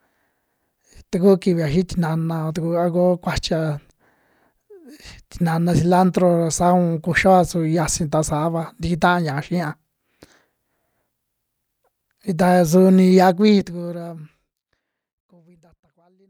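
Nothing stood out on listening to this speech recording, which closes with a smooth fade out starting at around 13 s and reaching silence at 16.3 s.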